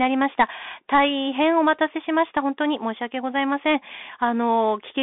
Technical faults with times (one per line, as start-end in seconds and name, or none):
0.00-5.03 Bluetooth CVSD headset codec